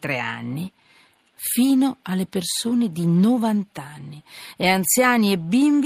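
Speech recording, no technical faults heard.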